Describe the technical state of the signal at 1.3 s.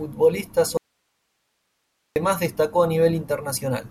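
At 1.3 s you're right in the middle of an audio dropout to a faint residue, running from 0.77 to 2.16 s. The speech cuts out abruptly, leaving only hiss roughly 50 dB below the signal. That's likely the source dropping while the downstream path stayed live.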